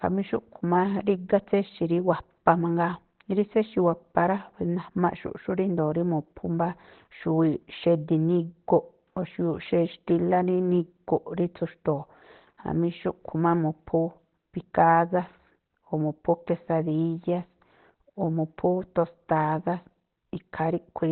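Across the whole clip, speech is muffled and hoarse with nothing above 4.3 kHz, likely heavy Opus compression in its speech mode: hoarse rather than swirly like MP3.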